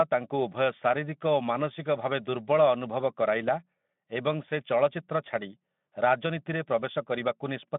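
Nothing stood out on listening; the speech comes through the narrow, telephone-like band of its Speex path without any event or defect drawing attention.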